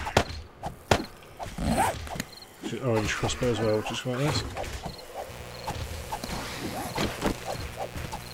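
Mains buzz runs from 5.29 s to the end: a raspy 60 Hz buzz about 15 dB below the audio, from switching spikes twice per mains cycle.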